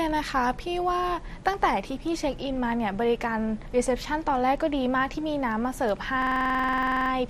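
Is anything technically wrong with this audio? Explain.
Yes. From 6.22 to 7.11 s there is a system hang loop. The system froze while the hardware replayed one 46 ms slice nineteen times, which fits a 2048-sample buffer. The result is a rigid 21.5 Hz machine-gun stutter of identical repeats, with no silent gaps as a dropout would leave.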